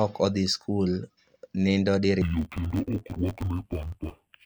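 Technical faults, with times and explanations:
2.22–4.46 s, interleaved audio read as planar: 11.6 ms blocks, fitting a 512-sample buffer, split into half-speed halves, giving a dull robotic buzz near 86 Hz with no octave drop.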